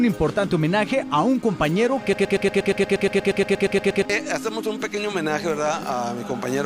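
A broken-record loop runs from 2.13 to 4.05 s: a 0.12 s fragment of sound repeats exactly, back to back, 16 times. The player or stream likely stalled and kept resending its last held piece, so the audio due in that span is lost.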